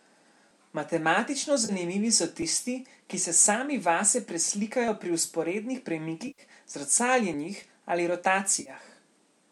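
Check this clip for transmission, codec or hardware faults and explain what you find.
Yes, there are two kinds of fault: three dropouts from AAC frame loss with concealment, and one skip that sounds like audio missing between chunks. The speech itself has the mild roughness that likely comes from low-delay AAC compression.

AAC frame loss with concealment occurs at 1.65 to 1.72 s (40 ms), 6.27 to 6.42 s (110 ms) and 8.60 to 8.70 s (50 ms). The gaps fit whole runs of roughly 10 ms frames. For each missing frame the decoder rebuilt the sound from the last good spectrum, so the patches come out smeared and noisy. Unlike a chunk gap, nothing is cut out: the timeline keeps its length and the hole is filled with blurred sound.

At 2.42 s there is an abrupt jump. Roughly 40 ms of sound is gone and the material on either side is butted together with no fill, so the speech lurches forward instead of blurring. 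This is likely audio missing between chunks, a piece dropped while one block of about 2.5 s was closed and the next opened. It differs from the frame losses because the sound is removed outright, not concealed.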